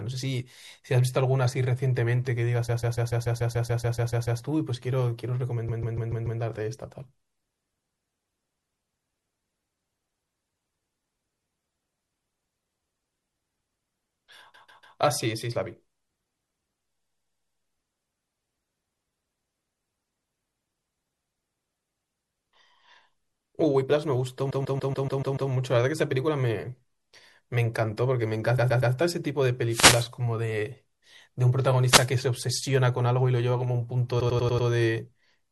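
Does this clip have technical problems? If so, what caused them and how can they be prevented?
Yes. The whole clip has a watery, swirly texture with dulled treble and chirpy s sounds, likely MP3 compression at a low rate, which fits something around 64 kbps, where the encoder drops weak detail frame by frame. Encoding at a higher bitrate would avoid it.

There are repeated frames at 2.68–4.41, 5.68–6.40, 14.53–14.97, 17.03–17.61, 24.49–25.50, 28.57–28.93 and 34.19–34.67 s. Short blocks of 144 ms (120 ms at 28.57 s, 96 ms at 34.19 s) loop as a stutter, adding up to 5.3 s in total. Checking that the transport doesn't resend or rewrite already delivered frames prevents this.

Two wireless microphone noise hits land at 29.69–30.08 and 31.82–32.13 s, each a short swish of static as the radio signal fades and receiver noise rises over the speech. Better antenna placement or diversity receivers keep the signal out of those fades.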